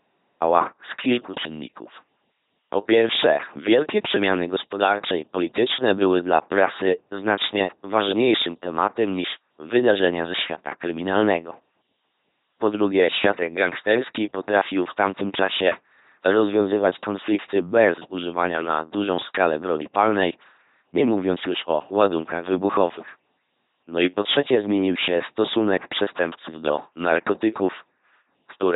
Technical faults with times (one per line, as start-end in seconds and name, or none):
0.00-28.75 LPC-10 vocoder
0.00-0.43 cut-off start